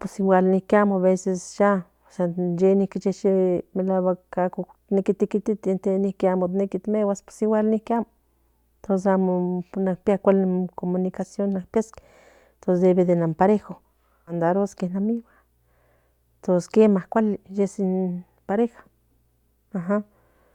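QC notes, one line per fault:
14.27 to 14.33 s, stream segment skipped: the likely cause is that one chunk of the segmented stream failed to arrive and the player moved straight on to the following chunk instead of waiting. That gap in delivery shows up as a sudden forward jump in the speech, marked by a small blip, with the continuity of the sentence broken because the material that chunk carried is absent rather than delayed.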